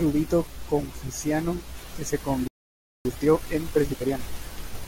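The player most likely ran out of buffered data or had its output thread blocked just after "confuciano que se," producing a playback stall: the speech cuts off mid-flow at 2.48 s and stays silent for about 0.58 s, resuming at 3.05 s where it stopped.

To work off the backlog built up during that gap, the player then applies time-compressed catch-up from 3.05 s to 4.19 s, trimming and cross-fading short pieces so the speech runs at 1.5 times normal speed. It sounds hurried but keeps its natural pitch.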